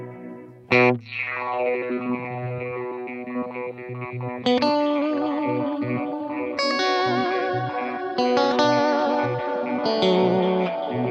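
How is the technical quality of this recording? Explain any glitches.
Nothing stood out on listening; no glitches or technical faults caught the ear anywhere in the recording.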